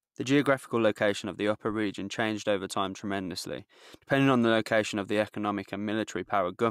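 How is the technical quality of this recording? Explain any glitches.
No glitches or dropouts are audible anywhere in the recording, and nothing in it calls for explanation.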